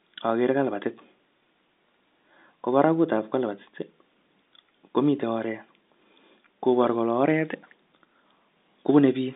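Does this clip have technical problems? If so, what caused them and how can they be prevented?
No, nothing stood out as a problem when listening to this speech, which comes through at ordinary telephone bandwidth with no content above about 3.8 kHz, as expected for a G.711 line.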